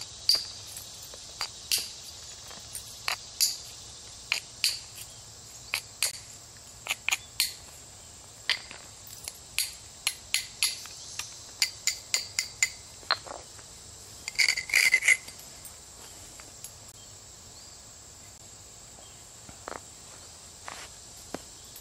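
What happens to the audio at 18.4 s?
At 18.38 s a block of digital silence occurs: for about 16 ms the audio samples were replaced with zeros. The sound drops straight to dead silence and straight back with no fade, and the gap is heard as a short hole.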